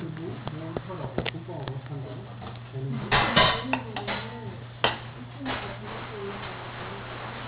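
A recording of everyday sounds that carries aliasing from start to finish. The high end sounds gritty and metallic, with harsh tones that don't belong to the sources, and the spectrum runs hard right up to 4 kHz before stopping dead. The content was resampled without an anti-alias filter, which fits a drop from 48 kHz to 8 kHz, so everything above the 4 kHz fold point mirrored back down into the audible band, where the false components sit roughly as loud as the genuine sound.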